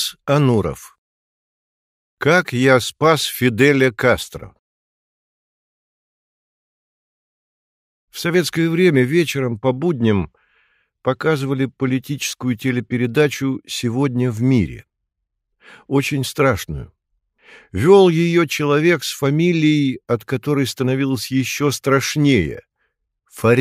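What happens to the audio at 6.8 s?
Nothing goes wrong at 6.8 s; the audio plays through that moment intact, with no dropout, click, glitch or other fault.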